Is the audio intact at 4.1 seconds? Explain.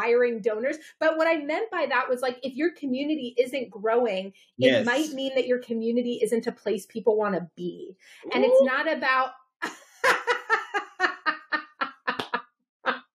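Yes, at 4.1 s the audio is intact, with no dropout, click, distortion or other fault audible at that moment.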